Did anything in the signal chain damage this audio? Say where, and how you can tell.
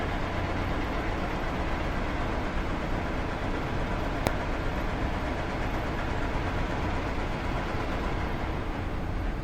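Yes. At 4.27 s there is a single sharp bang: invalid numbers at full scale. A floating-point processing stage produced infinite or invalid values, and conversion to fixed-point clamped them to the rail for about 0.67 ms, consistent with a 32-sample block. The waveform shows a flat-topped slab at one extreme value, far beyond the audio's peaks, and the spectrogram shows a full-height vertical stripe.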